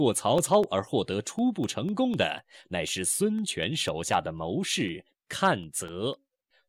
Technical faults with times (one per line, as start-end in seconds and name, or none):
0.13-6.63 periodic USB or driver dropouts